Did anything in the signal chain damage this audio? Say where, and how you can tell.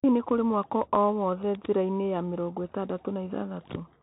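Yes, at the codec stage: this speech has been through a Bluetooth CVSD headset codec for its whole length. Nothing passes above about 3.8 kHz, s sounds come out scratchy, and a granular hiss sits underneath. The one-bit up/down encoder's adaptive step can't keep pace with loud high-frequency content.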